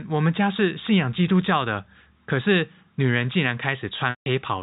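From 4.10 to 4.26 s the speech holds on a buzzy, repeated tone that fades away, then resumes through a brief cross-fade. This is packet loss with pitch repetition: 160 ms went missing, and the receiver looped the last pitch period to bridge the gap.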